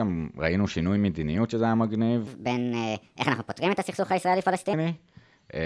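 From 2.27 s to 4.73 s the speech turns fast and high-pitched, a wrong sample rate fault. The samples are clocked out at a higher rate with no conversion, so speed rises 1.38 times and pitch about 5.5 semitones together, which fits 16 kHz audio played at 22 kHz.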